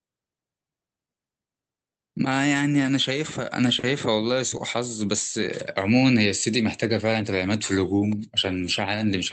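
At 3.79 to 3.86 s, a short stall from a late packet: the jitter buffer ran empty, so the receiver stretched the last sound for 40 ms, then continued intact but 40 ms later. It sounds like a brief held sound with a faint buzz or dip. On a spectrogram the harmonics smear flat, and the waveform shows a repeated, near-periodic stretch.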